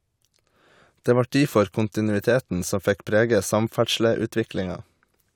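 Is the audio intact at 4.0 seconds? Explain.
Yes, the speech at 4.0 seconds is intact, with no audible fault at that moment.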